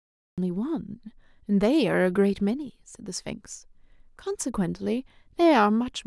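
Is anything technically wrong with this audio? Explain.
Yes. The clip has a cut-off start: from 0.00 to 0.38 s there is digital silence, and at 0.38 s the speech begins abruptly mid-sound. Capture began late, so the opening attack is missing and the level jumps straight from nothing to full signal.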